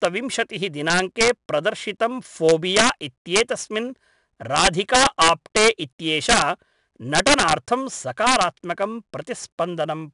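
Integer overflow strikes this speech recording at 0.05 s and across 0.90–1.29, 2.49–2.89, 3.36–3.41, 4.56–5.68, 6.29–6.42, 7.15–7.53 and 8.27–8.43 s. Peaks driven about 0 to 8 dB past full scale wrap to the opposite sign instead of limiting, producing violent cracks harsher than clipping. 4-bit ADPCM compression runs throughout: coarse predicted steps leave a gritty hiss riding every loud syllable and smearing sharp onsets, while nothing above 10.6 kHz survives, which points to a lowered sample rate at roughly 89 kbps.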